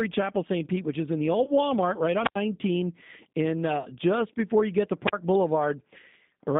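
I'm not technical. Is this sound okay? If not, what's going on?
No. Three separate problems can be heard.

The whole recording has passed through the G.729 codec, a compressed phone-call format. It keeps only the middle of the sound, roughly 150 Hz to 3.7 kHz, so there is no deep bass and no crisp top. The speech sounds thin, slightly rough and a little robotic. Unlike the other two faults, this never comes and goes. It colours every moment of the clip.

There are two short hiccups where part of the call went missing in transit: VoIP packet loss concealed by the speech codec. The first is at 1.44 to 1.51 s, right after "which is in the". The second is at 3.83 to 3.87 s, just before "just before you get". Each gap is about 20 ms, which fits a single lost packet. Instead of going silent, the phone software guessed to fill the hole, so you hear a brief smeared fill-in that takes a moment to recover.

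There are also two true drop-outs, a wireless microphone squelch dropout: at 2.22 to 2.38 s, with about 86 ms of near-silence, and at 5.05 to 5.13 s, right after "before you get to", with about 41 ms of near-silence. Here the radio link from the microphone weakened and the receiver shut the sound off completely. The hiss rises, then there is a real hole rather than a smeared fill-in, and then the sound returns.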